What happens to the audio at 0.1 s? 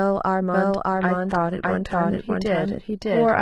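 At 0.1 s the speech carries a doubled audio track throughout. A second, equally loud copy trails by roughly 0.7 s, dry and abrupt, likely from an edit misaligning two copies.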